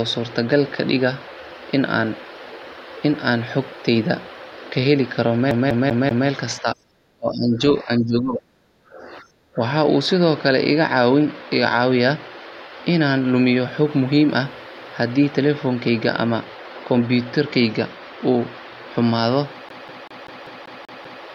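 From 5.51 to 6.29 s the same 0.19 s fragment of speech repeats four times, each pass broken by a brief mute. It is the quick, even stutter of a CD stuck on one turn: a scratch kicks the laser back a track at that spot on every rotation. From 6.61 to 7.60 s and again from 7.84 to 9.60 s, the speech sinks by up to roughly 25 dB. The likely cause is speech suppressed in double talk: with both ends talking, the echo canceller could not tell its talker from the loudspeaker echo and turned the voice down. From 19.69 to 21.24 s the disc sticks again, cycling the same 0.19 s slice eight times with a short mute at each jump.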